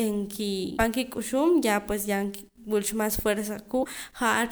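Damaged data in a compressed stream breaks into this speech recording twice, from 0.76 to 0.80 s and from 3.81 to 3.85 s, each time as a short blip about 40 ms long. In both places part of the encoded stream is corrupt, so the decoder cannot read those frames correctly, loses its place in the bitstream and has to hunt for the next valid frame header before normal decoding resumes.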